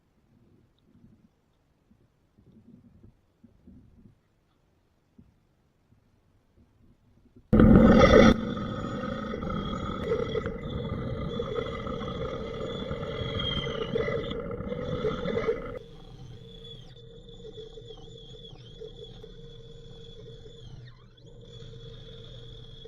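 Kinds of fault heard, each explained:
Compressed frames skipped: At 9.41 s the audio jumps ahead by roughly a tenth of a second, which fits about four lost codec frames.
Mains buzz: From 15.47 to 16.95 s a steady, raspy buzz sits about 40 dB below the signal, built on 60 Hz and harmonics reaching several kilohertz. Switching spikes twice per cycle give it that edge, unlike the smooth tone of plain hum.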